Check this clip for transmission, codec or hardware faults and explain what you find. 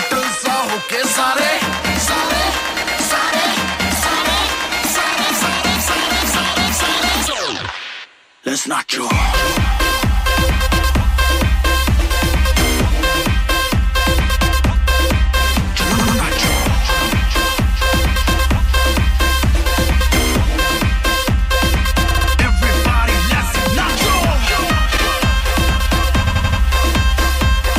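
The clip has four bursts of repeated frames, at 15.98 s, 22.10 s, 24.96 s and 26.26 s. A short stretch of compressed frames was sent again, so the decoder replays it. At 15.98 s and 26.26 s an 85.3 ms block repeats twice and four times. At 22.10 s and 24.96 s a 64.0 ms block repeats three times and once. You hear a stutter. On a spectrogram the same slice is tiled side by side, and the waveform shows identical shapes.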